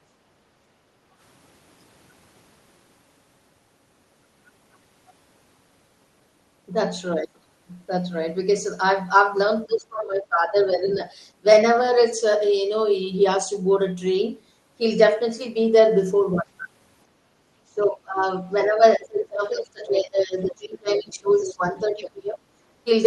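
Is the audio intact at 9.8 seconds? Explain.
No. At 9.8 seconds the clip is inside a stretch of speech suppressed in double talk, running from 9.66 to 11.0 s. Across roughly a second in total, the speech level is pulled down, dipping by around 20 dB at its deepest before recovering. The likely cause is an echo canceller meeting simultaneous talk from both ends: unable to separate the near talker from loudspeaker echo, it attenuated everything, taking the wanted speech down with the echo.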